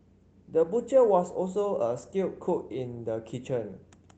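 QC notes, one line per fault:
Nothing to flag on this speech clip; the Opus voice coding at about 24 kbps in its hybrid mode leaves only a light touch on the sound.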